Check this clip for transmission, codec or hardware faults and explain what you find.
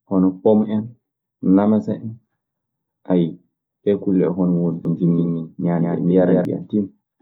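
One fault appears. From 4.85 to 6.45 s there is a doubled audio track. A slower second path or a misaligned edit likely mixes in a copy roughly 150 ms late and about 5 dB quieter, which starts and stops abruptly.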